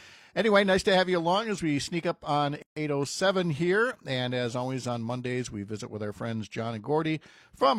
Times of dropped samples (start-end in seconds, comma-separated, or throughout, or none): none